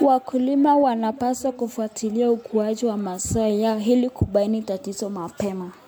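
Throughout the speech there is generation loss: a swirly, hollow smear with blurred consonant attacks, likely from about four successive MP3 passes at a rate that fits 128 kbit/s. Unlike a single low-bitrate encode, content reaches 20.1 kHz, yet artefacts still pile up.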